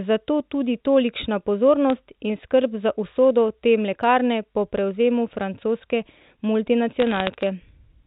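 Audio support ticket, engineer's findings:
Bit errors on the digital phone line: sharp tick at 1.90 s, between "tudi tolikšna" and "in skrb za usodo"; crackle burst 7.00–7.47 s. A-law line, low error rate, flipped sign/high bits jump single samples. Waveform shows isolated spikes; spectrogram shows thin full-band vertical lines.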